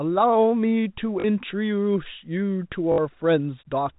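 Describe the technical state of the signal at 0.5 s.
At 0.5 s the speech is intact, with no fault present, only the narrow telephone band of G.711 coding that stops short of 4 kHz.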